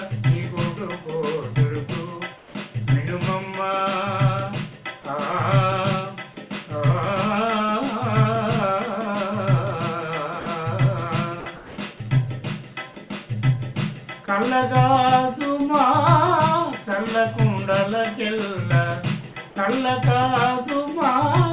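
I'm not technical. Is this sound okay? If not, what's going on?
No, there are a few small glitches. The first kind is comfort noise in place of the background. At 2.38 to 2.54 s the real background briefly turns into a flat, featureless hiss that's noticeably quieter, and again at 11.56 to 11.78 s, a little less obviously. The call system likely stopped sending during a lull and played stand-in noise.

The second kind is sound dropped by the voice detector. At 10.4 to 10.46 s, 11.4 to 11.46 s, and for a tiny moment at 11.98 to 12.00 s, the actual sound vanishes and that same bland noise fills the gap. The detector likely mistook those bits for background and cut them.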